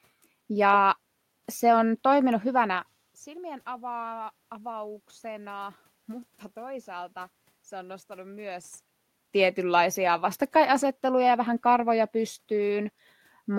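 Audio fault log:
No faults detected.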